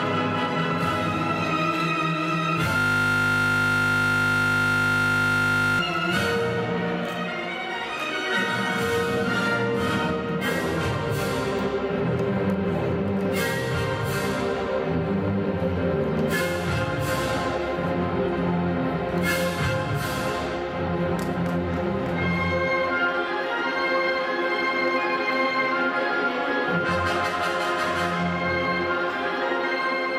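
From 2.78 s to 5.79 s the audio locks into a system hang loop. The host stalled while the sound hardware kept replaying the same region of its ring buffer, so a single 20 ms slice repeats end to end, roughly 150 times. At a 50 Hz loop rate the repetition fuses into a steady buzz at that fundamental rather than a stutter. The buzz holds for about three seconds before normal audio returns.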